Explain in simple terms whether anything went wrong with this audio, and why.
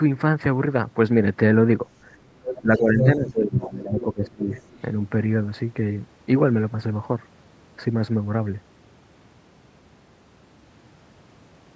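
A couple of things go wrong, both packed between about 2.4 and 4.8 seconds.

First, the other side's voice leaking through: scraps of a second voice show up at 2.44, 2.77, 2.99, 3.99 and 4.52 s. The one at 2.99 s is about as loud as the talker. It's likely loudspeaker sound that the echo canceller didn't fully scrub out.

Second, speech suppressed in double talk: from 2.62 to 4.5 s the talker's voice keeps dipping, sometimes way down. Likely both people spoke at once, and the echo canceller, unable to tell them apart, turned everything down.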